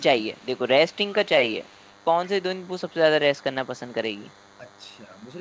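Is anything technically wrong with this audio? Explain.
Yes. A DECT cordless phone buzz runs through the whole clip: a thin, steady 100 Hz buzz with dense harmonics, about 30 dB below the speech. It comes from the radio burst every 10 ms being rectified in the audio circuit. Unlike mains hum, it sounds buzzy rather than tonal.

An echo leak appears from 0.0 to 2.95 s and again from 3.4 to 5.34 s. A faint copy of the speech, roughly 35 dB down, trails the original by 0.17 s. This is most likely far-end loudspeaker sound that the echo canceller failed to remove. Reverb would smear the sound, but this is a discrete, delayed repeat.

The speech is suppressed in double talk at 0.20 to 0.43 s, 0.95 to 1.12 s and 5.06 to 5.10 s. The level dips by roughly 10, 15 and 5 dB respectively, which is likely the canceller ducking both talkers at once. The G.722 call path's normal cutoff at 8 kHz is also present.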